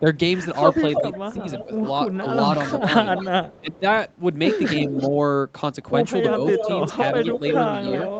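From 0.00 to 0.05 s the level dips by a few decibels, most likely speech suppressed in double talk: the echo canceller turns down the near talker along with the far side. On a waveform it shows as a brief sag in the envelope. From 0.71 to 3.61 s there is an echo leak, a faint copy of the voice about 10 dB down arriving 325 ms late, likely from loudspeaker echo the canceller failed to remove. A spectrogram shows ghost harmonics trailing each syllable. Within that stretch, 1.0 to 2.23 s brings more double-talk suppression, with dips of up to about 10 dB totalling roughly half a second. These appear as notches in the waveform and faded bands in the spectrogram. At 3.61 to 3.84 s the voice drops sharply, by about 20 dB, and the waveform nearly flattens. Echo leaks again from 4.82 to 5.1 s and from 6.3 s to the end, now only about 5 dB below the speech and delayed about 326 to 327 ms. Between 6.66 and 7.42 s, short suppression dips of about 5 dB turn the voice down.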